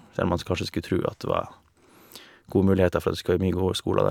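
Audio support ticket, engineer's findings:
Listened to the speech clip and found nothing wrong with it, so no fault to log on this one.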